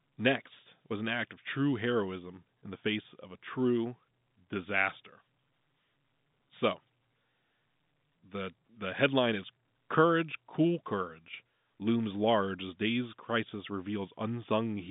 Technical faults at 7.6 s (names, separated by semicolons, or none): none